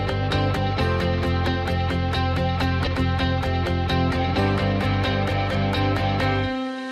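Compressed frames skipped at 1.42 to 1.49 s and again at 2.84 to 2.88 s: whole frames of the encoded audio never reach the output, so playback jumps forward, by about 20 ms at the first point and roughly a tenth of a second at the second. Each jump is the signature of missing or decoder-rejected frames.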